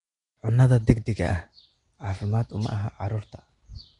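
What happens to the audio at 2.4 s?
At 2.4 s you're hearing the same thing that runs through the whole clip: likely Nellymoser compression. The speech has a rough, hissy halo and a smeared, underwater feel, since weak bands got no bits and were filled with noise. Nothing comes through above about 10.6 kHz, which fits a low-rate Flash-era microphone codec.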